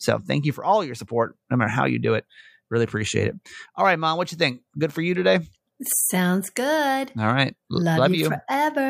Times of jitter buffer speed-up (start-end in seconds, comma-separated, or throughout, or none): none